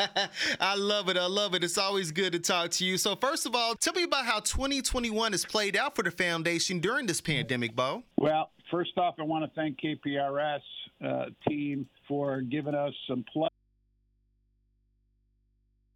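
At 13.49 s the sound drops out to a faint residue of hum, about 40 dB down, until the end, likely a lost signal on a still-live input; the waveform collapses abruptly, leaving steady low-frequency hum lines on the spectrogram.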